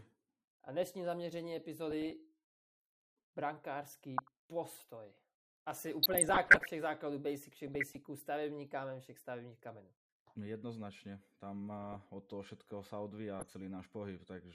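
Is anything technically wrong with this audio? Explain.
Yes. Throughout, the speech is plainly dulled, with a gurgling, granular grain. This is likely MP2 compression at a rate that fits about 80 kbps: starved sub-bands drop out and the rest are coarsely quantised. A spectrogram shows a ragged, flickering top edge where upper bands switch off.

DAB burbling occurs at 1.91–2.11 s (after "dnešní zaměření"), 4.18–4.28 s, 6.03–6.70 s, 7.68–8.03 s (between "základů basic všech" and "stavební kámen všech stavebních"), 11.78–11.97 s (before "od toho všetkého sa") and 13.40–13.51 s. Bit errors slip into the MP2 data, so corrupted samples or scale factors add watery blips and bubbling. On a spectrogram these appear as isolated blotches confined to single sub-bands.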